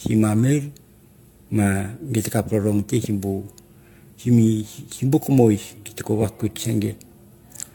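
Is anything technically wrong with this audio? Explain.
Yes. Throughout, the speech sounds swirly, hollow and smeared, with blurred attacks and nothing above 17 kHz. This is likely generation loss: roughly five successive AAC-style encodes, consistent with about 96 kbit/s, each compounding quantisation noise and spectral holes.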